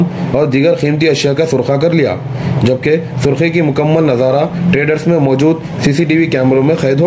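From start to finish the gain swings by roughly 15 dB. Loud and quiet moments sit unnaturally close in level, so everything sounds squashed and pressed forward. This is gain pumping, likely from the input gain being set far too high and a fast limiter or compressor clamping down on each peak. Through the call path, nothing reaches above 8 kHz, which fits G.722 at 64 kbps.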